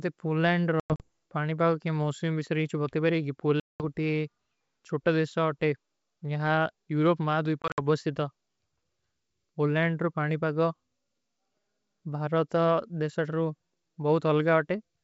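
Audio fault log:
0.80–1.08 s, 3.60–3.83 s, 7.62–7.80 s: packet loss on an ADPCM call. Sound drops out to hard-edged silence: 140 ms scattered over 200 ms, then a solid 200 ms gap, then 100 ms over 160 ms. That is roughly seven, ten and five packets. Each return comes back with brief, slight distortion. The decoder's predictor and step size have drifted from the sender's and take some tens of milliseconds to resync. The wideband G.722 coding between gaps stays clear.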